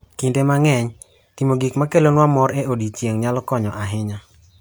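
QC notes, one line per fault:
No faults heard anywhere in the speech.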